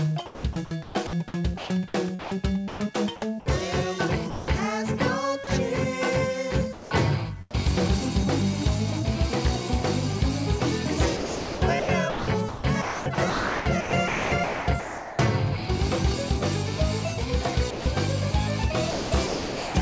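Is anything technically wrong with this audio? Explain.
Yes, there are two related faults, both heard against a call path whose bandwidth stops at 8 kHz, as expected for G.722.

Sound chopped by the voice detector, at 0.26 to 2.80 s, 11.17 to 15.19 s and 18.91 to 19.75 s. The sender's voice activity detection likely toggled on and off repeatedly in each stretch, substituting comfort noise for roughly 0.87 s, 2.49 s and 0.69 s of the sound respectively. The result is choppy audio with several holes in the sound.

Sound dropped by the voice detector, at 4.30 to 4.48 s, 5.44 to 5.47 s, 6.73 to 6.91 s and 17.71 to 17.86 s. Here the detector likely judged quieter material to be background and stopped transmitting, so the receiver filled the gap with comfort noise. That cost 180 ms, 30 ms, 180 ms and 150 ms of sound. Each time the sound gives way to steady noise or near silence, then returns when the detector reopens.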